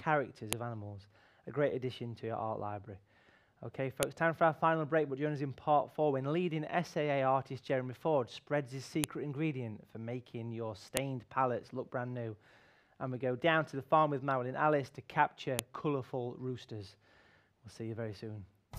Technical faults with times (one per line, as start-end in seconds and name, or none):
0.53 file header played as audio
4.03 file header played as audio
9.04 file header played as audio
10.97 file header played as audio
15.59 file header played as audio